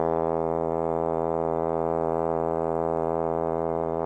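Listening to the music revealed nothing that stood out as a technical problem.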